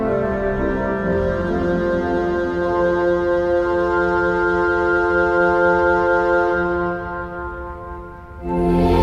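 No technical faults are audible.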